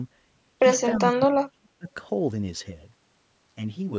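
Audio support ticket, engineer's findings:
Echo leak, 0.94–0.99 s: short delayed scrap of the voice coming back about 0.3 s late (303 ms), roughly 20 dB under the speech. Likely the far end's echo canceller letting some of its loudspeaker pickup through.

Speech suppressed in double talk, 0.97–1.88 s: the voice dips and breaks up in pieces, about 0.7 s affected in total, deepest drop around 35 dB. Likely the canceller couldn't separate talker from echo and ducked everything at once.

Channel delay (comb filtering), 2.62 s to end: hollow, phasey tone. One channel lags by roughly 10 ms before the mono sum, so shared content cancels at notches from around 50 Hz up, spaced about 100 Hz apart. The call mic processing's 8 kHz top end is expected here.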